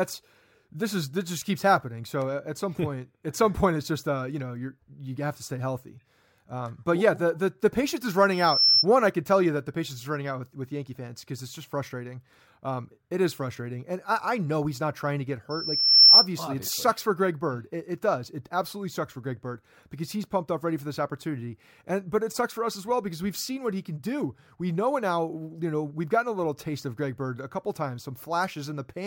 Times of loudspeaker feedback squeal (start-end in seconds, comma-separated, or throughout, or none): 8.31-8.86, 15.50-16.27